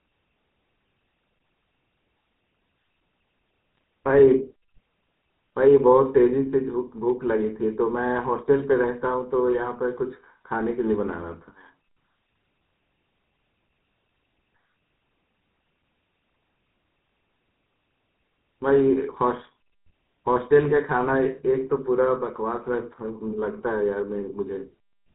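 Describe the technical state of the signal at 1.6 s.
GSM full-rate codec damage is present at 1.6 s, as it is throughout the speech. The codec models the vocal tract and drives it with a sparse pulse excitation, which fits a 13 kbps stream, and cuts everything above 4 kHz, leaving a plainly audible buzzy, gravelly roughness.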